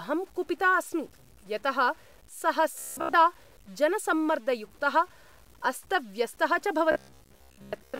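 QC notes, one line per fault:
Throughout, low bit depth without dither: the speech carries a grainy, rasping distortion that moves with the voice. It sits around 30 dB below the speech and turns gritty as the level drops, with the quietest parts breaking up instead of fading smoothly. The likely cause is that the signal was cut to very few bits by plain truncation, which fits 8-bit, with no dither, so the error follows the waveform.
2.79–3.15 s and 6.92–8.00 s, robotic sound from repeated short buffers: in both stretches the speech turns into a stiff, metallic buzz at a fixed 66.8 Hz, while still roughly tracking the syllables. The likely cause is that fresh audio arrived too rarely and playback filled the gaps by looping the last fragment, which fits a buffer of about 15 ms. Most of the real audio was skipped, and the repetition imposes that steady pitch.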